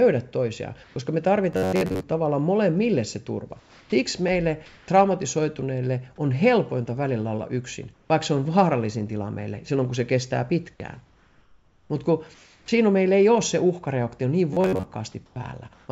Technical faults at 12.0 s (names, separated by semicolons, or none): comfort noise in place of the background